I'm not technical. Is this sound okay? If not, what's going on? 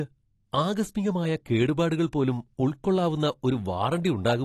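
No. Throughout, the speech sounds dull and warbly, with fizzy s sounds and nothing above 12.1 kHz, likely AAC compression. Simple muffling would lack that warble.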